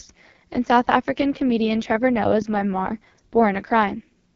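Throughout, AMR wideband (HD Voice) codec damage is heavy. The speech sounds rough and raspy, which fits its lowest 6.6 kbit/s rate. Nothing reaches above 7.1 kHz.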